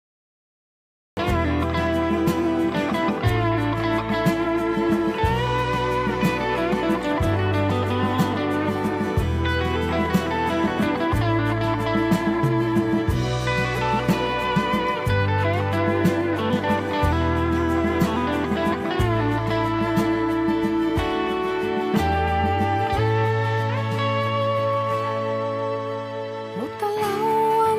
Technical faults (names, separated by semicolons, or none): cut-off start